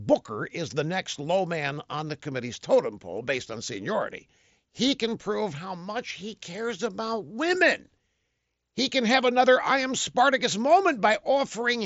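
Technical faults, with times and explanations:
No technical faults can be heard in this speech. It arrives through a Bluetooth mSBC headset codec, which leaves nothing above 7.7 kHz and adds a light graininess on the louder sounds.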